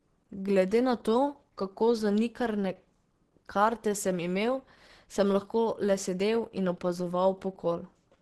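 From start to finish the speech sounds muffled and hoarse, with a grainy, rough edge on the tones and nothing at all above 12.2 kHz. That's likely Opus compression working hard. The damage is heavy and the bandwidth is capped at super-wideband, which fits a starved rate of around 12 kbps. At that rate the encoder runs in its hybrid mode, patching the upper bands with folded or noise-like energy instead of real detail.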